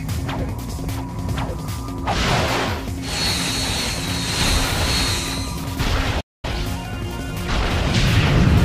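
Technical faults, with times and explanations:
6.20 to 6.45 s, playback stall: the sound cuts out mid-flow for about 228 ms and then resumes. A waveform shows a flat line across that gap, and a spectrogram shows a clean vertical blank band. The likely cause is the player running short of buffered data or its output thread being briefly blocked.
6.45 to 7.97 s, time-compressed catch-up: straight after the gap, the audio runs about 1.15 times faster at unchanged pitch. The player trims and cross-fades small slices to shed its backlog. On a spectrogram, events are horizontally squeezed while harmonic spacing stays constant.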